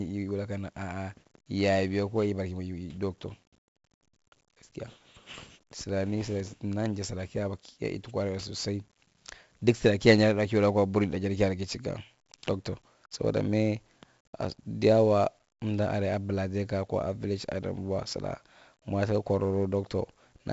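From start to finish the speech carries a gritty hiss that swells and fades with the loudness of the voice, roughening every strong syllable and smearing sharp onsets, while nothing reaches above about 7.7 kHz, leaving the sound dull. This is heavy 4-bit ADPCM compression. Each sample is coded as a coarse 4-bit step from a prediction, so the error rides along as level-dependent noise and lags on fast attacks. The 64 kbps rate and the 7.7 kHz ceiling fit a 16 kHz sample rate.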